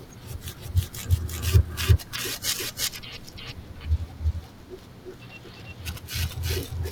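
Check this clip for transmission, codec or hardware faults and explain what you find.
There's one clear fault here, running the whole way through: a doubled audio track. Every bit of speech comes back a second time, roughly 400 ms later and at about the same level as the original, so the two copies overlap and smear into a confusing stutter. The repeat is full-band and bone dry, with no decay or room tone. The likely cause is the same signal being captured twice, with the second copy arriving over a slower path.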